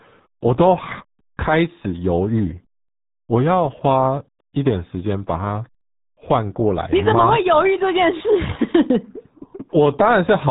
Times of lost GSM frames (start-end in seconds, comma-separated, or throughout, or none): none